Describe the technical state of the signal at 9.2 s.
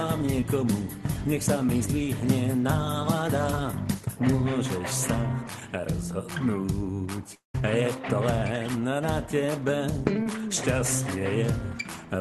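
At 9.2 s the signal is intact, with no audible fault at that moment.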